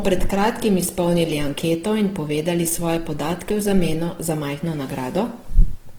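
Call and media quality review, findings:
Opus compression, throughout. Speech grainy, rough, noisy rather than swirly. Likely cause: encoder in music (CELT) mode short of bits, filling bands with folded or noise-like content. Bandwidth stays full, content reaching 20.3 kHz. Damage plainly audible, fits a bitrate near 16 kbps.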